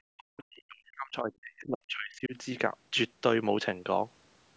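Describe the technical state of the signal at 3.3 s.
At 3.3 s the speech is intact, with only the normal band limit of the call microphone processing, which leaves nothing above 8 kHz.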